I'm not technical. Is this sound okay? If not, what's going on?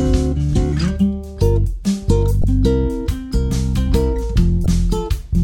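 No. The music gives two brief glitches, at 2.41–2.44 s and 4.63–4.66 s. That's damaged data in a compressed stream: corrupted bits make the player stumble and resync.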